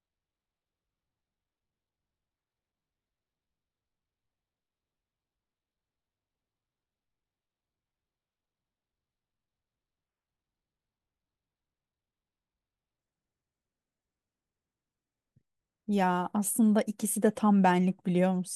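A speech recording whose opening, from 0 to 12.99 s, plays as a section at the wrong speed, running at 0.532 times normal rate and dropping pitch by around ten semitones, likely from a wrong playback clock. Unlike a pure pitch shift, timing drags too, then normal speed resumes.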